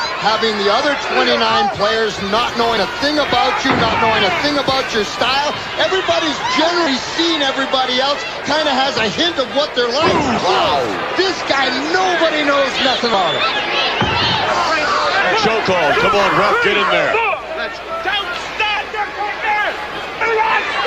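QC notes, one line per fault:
2.77 s, compressed frames skipped. The audio jumps ahead by about 70 ms, a couple of frames fitting 32 ms framing.
6.86 s, compressed frames skipped. Roughly 150 ms of sound goes missing, several whole frames.
13.14 s, compressed frames skipped. Another jump of about 150 ms, a few frames long. The sound lurches forward.
15.22 s, compressed frames skipped. This is the largest gap, about half a second and many frames dropped. The sound plainly leaps ahead.
18.77 s, compressed frames skipped. About 200 ms is lost, several frames.
20.21 s, compressed frames skipped. Roughly 150 ms of sound disappears, a handful of frames.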